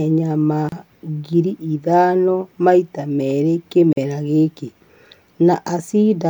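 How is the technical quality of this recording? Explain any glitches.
The recording has two short dropouts where separately encoded pieces were joined.

A gap at a join of encoded pieces occurs at 0.69 to 0.72 s, just before "ngiri ithano maita merĩ", and again at 3.93 to 3.97 s, right after that phrase. Each encoding pass left its start-up delay and final-frame padding in place, so 32 ms and 44 ms of silence open abruptly, edges smeared, before the speech resumes where it stopped.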